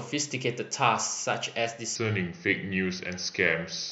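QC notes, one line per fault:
1.95–3.92 s, section at the wrong speed: from the midpoint to the end the speech turns deeper and slower, dropping about three semitones as it plays at 0.838 times its proper rate, likely because this section was resampled or clocked at the wrong rate, which slows timing and lowers pitch together.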